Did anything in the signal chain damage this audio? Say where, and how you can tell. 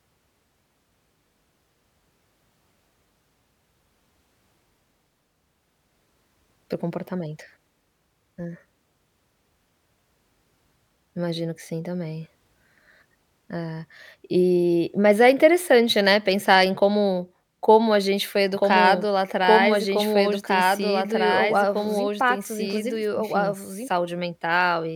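Yes. From 18.54 s to 23.88 s a doubled audio track runs under the speech: a second, full-band copy trails the original by about two seconds at around 5 dB lower. It is most likely a duplicated capture or routing path, or an edit leaving two copies out of step. It is not acoustic echo or reverb, because the copy is a single repeat with no decay or room colour, and it starts and stops abruptly.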